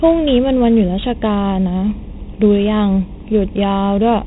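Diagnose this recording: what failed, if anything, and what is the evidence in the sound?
Channel delay (comb filtering) at mono summing: one channel lags by a fraction of a millisecond, cutting evenly spaced notches from around 1.5 kHz, so everything sounds hollow.

Heavy 4-bit ADPCM compression in the codec, consistent with 32 kbps, adds level-following gritty hiss and rough attacks, with nothing above 3.9 kHz.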